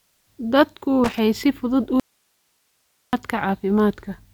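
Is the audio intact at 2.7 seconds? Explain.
No. At 2.7 seconds the speech sits inside an audio dropout to a faint residue, running from 2.00 to 3.13 s. The signal likely broke upstream while the chain stayed live, so only hiss remains, far below the speech level. The abrupt cut on each side marks it as a dropout, not a pause or fade.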